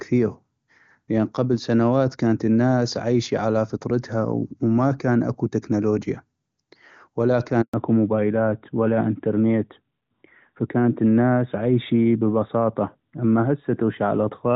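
At 7.62 s the speech cuts out in a handover gap lasting 120 ms, until 7.74 s. The call is moving from one network to another, and no speech frames arrive while the new link comes up. The sound fades within a few tens of milliseconds into true silence, then resumes. Unlike ordinary packet loss, the gap holds no concealment: no stretched or repeated fragments and no buzzy filler. The audio simply stops and starts again.

From 7.74 s to the end, the call shows a fallback to narrowband. Before the handover, the AMR wideband (HD Voice) codec carries faint or no audible damage, and the clear speech fits its highest rate. After the switch, everything above 4 kHz is gone, and the speech turns muffled and rougher, as an AMR narrowband codec at 12.2 kbit/s sounds. What sets this apart from a simple low-pass filter is the sudden, lasting change at the handover, together with coding roughness in the remaining band.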